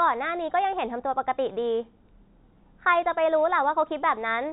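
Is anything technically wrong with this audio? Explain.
No, no technical faults here.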